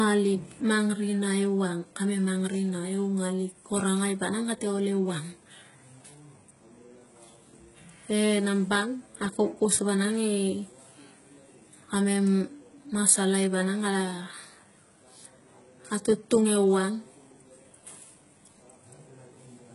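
Throughout the speech, the treble sounds synthetic and gritty, with nothing above 11.1 kHz. This is likely HE-AAC compression, heavily damaged at a bitrate near 12 kbps. The upper band is copied from lower frequencies, so s sounds turn lispy and metallic.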